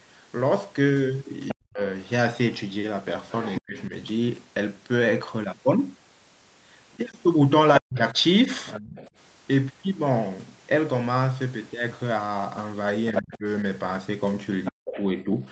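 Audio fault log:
1.48 to 3.61 s, 6.93 to 9.11 s and 13.15 to 15.02 s, other side's voice leaking through: the far end's loudspeaker audio was likely picked up by the microphone, and the echo canceller did not fully remove it. A second voice sits under the speech, about 10 dB below it in the first stretch, about 15 dB below in the second, and only about 5 dB below in the last, where it competes most clearly.
1.54 to 1.81 s, 3.6 to 3.92 s, 6.97 to 8.49 s and 13.13 to 15.45 s, speech suppressed in double talk: with both sides talking at once, the echo canceller likely couldn't separate the near talker from the echo and clamped down on both. The speech drops sharply, by around 40 dB at its deepest, in brief pieces of a few hundred milliseconds in the earlier ranges and about 0.7 s in total across the last one.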